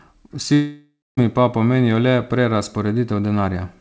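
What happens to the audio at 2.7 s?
At 2.7 s the speech carries on without any dropout, glitch or distortion, with only the steady 8 kHz upper limit of the G.722 call path that runs throughout.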